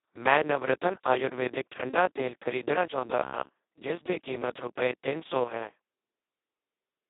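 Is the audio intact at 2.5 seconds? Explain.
No. At 2.5 seconds the speech carries Speex codec damage, and it runs through the whole clip. Speex is a CELP speech codec, and at its lowest settings it gets almost no bits for the excitation signal, so it behaves close to a vocoder. Here the damage is heavy. The speech sounds hoarse, noisy and robotic, which fits a very low bitrate near 2 kbps. It sits in a narrow telephone band of about 250 Hz to 3.7 kHz, with nothing above 3.8 kHz.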